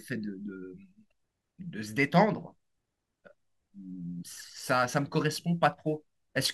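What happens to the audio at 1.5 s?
Nothing goes wrong at 1.5 s: the speech there plays through intact, with no dropout, click, distortion or other fault.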